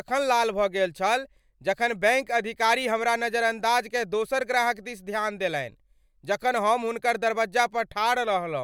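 No technical faults can be heard at any point in this speech recording.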